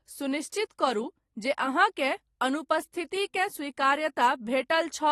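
Throughout the speech, nothing sounds above 12.4 kHz and sibilants turn fizzy and smeared. This is likely AAC compression at a low bitrate, around 32 kbps, where the encoder lowers its cut-off and coarsely quantises the upper bands, leaving the sound dull and warbly.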